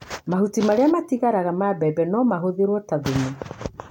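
A speech recording with no audible technical faults.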